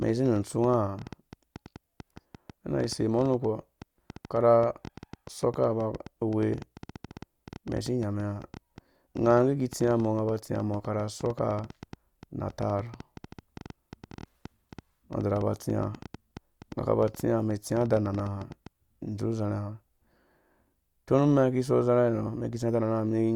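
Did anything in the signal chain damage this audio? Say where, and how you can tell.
Yes. A train of clicks runs from 0.02 to 18.7 s, around 150 irregular pulses at about 8 per second, as loud as the speech. This likely points to interference in the analogue wiring or interface.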